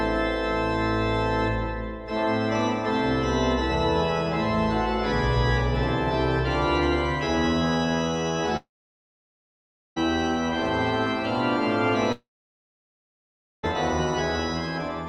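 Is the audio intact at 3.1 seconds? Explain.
Yes, the audio is intact at 3.1 seconds, with no dropout, click, distortion or other fault to be heard at that point.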